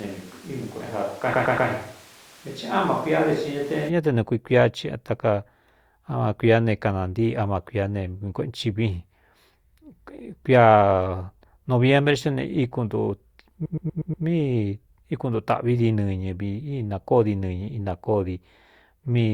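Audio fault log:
0.00–3.88 s, switch to a distant microphone. The speech is already hollow and roomy when the clip opens. It has thin low end and a level about 5 dB down. Room noise sits fairly high, only some 25 dB under the speech. At 3.88 s the sound snaps back to a close, full tone. The likely cause is that the close microphone dropped out and a farther pickup filled in.
1.33–1.69 s and 13.65–14.25 s, repeated frames. The same 120 ms slice of audio plays again and again, which fits a run of several compressed frames being reused. Each replay gives a stutter. The first burst repeats three extra times and adds 360 ms. The second repeats five extra times and adds 600 ms.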